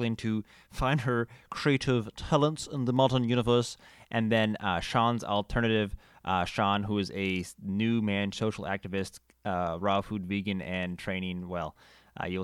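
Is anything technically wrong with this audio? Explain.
Yes, there's one small glitch. At about 2.97 s, right after "creative talents in the", you get a single sharp click. That's the classic sound of dropped samples: a fraction of a millisecond of the stream likely went missing, so the waveform jumps straight from one value to a later one instead of moving smoothly. The gap is far too short to lose any actual sound, so all you hear is that one tick, and on a spectrogram it shows up as a thin vertical line.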